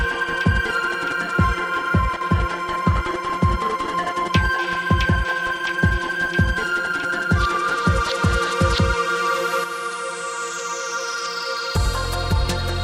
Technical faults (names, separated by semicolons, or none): sample clock jitter; one channel drops out